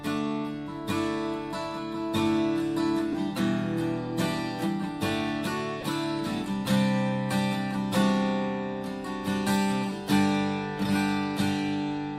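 Lost LE Audio frames occur at 3.13 s and again from 5.81 to 5.83 s. The first gap lasts about 7.5 ms, which fits one dropped LC3 frame; the second lasts 15 ms, consistent with two frames in a row. In each case the decoder fills the hole by repeating the previous spectrum with randomised signs, so any tonal content briefly turns into a noisy smear. Both gaps are too short to fade toward silence. Light codec compression is present throughout.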